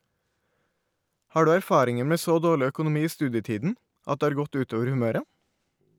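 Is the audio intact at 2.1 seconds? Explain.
Yes, at 2.1 seconds the speech plays through with no dropout, click, distortion or other fault.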